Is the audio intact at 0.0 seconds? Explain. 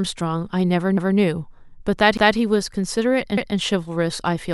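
Yes, at 0.0 seconds the speech is intact, with no audible fault at that moment.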